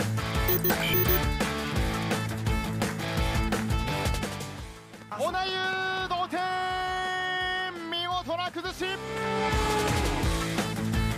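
From 5.02 to 5.98 s a regular train of clicks, about five at 4.2 per second, ticks over the sound about 5 dB above it, likely from interference or a faulty connection or power supply.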